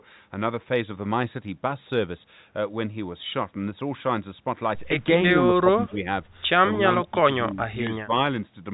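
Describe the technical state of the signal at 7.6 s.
At 7.6 s the speech sits at the tail of a short dip from 7.51 to 7.58 s, where the level falls by about 10 dB for roughly 70 ms. This is likely speech suppressed in double talk: an echo canceller, unable to separate the talker from incoming far-end sound, briefly turned the near-end signal down. The waveform envelope pinches inward across that span, and a spectrogram shows a narrow vertical strip of weaker energy.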